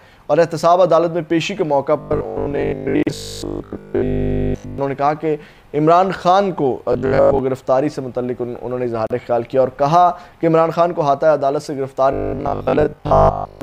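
From 2.01 to 4.78 s the sound turns into a rigid, metallic buzz at 50 Hz: robotic sound from repeated short buffers. Audio is likely arriving too seldom, so a 20 ms chunk keeps getting replayed while most of the real audio is skipped. Inside that stretch, at 3.03 to 3.07 s, a gap at a join of encoded pieces cuts in, a silence of about 37 ms with smeared edges. The buzz returns at 6.93 to 7.39 s. Another 37 ms gap sits at 9.07 to 9.10 s, six seconds after the first, which fits separately encoded pieces joined without trimming the encoder's start delay and end padding. The buzz comes back once more from 12.13 to 13.61 s.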